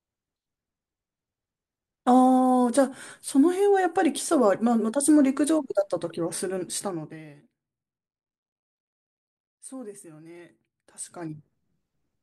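Nothing stood out on listening to this speech recording.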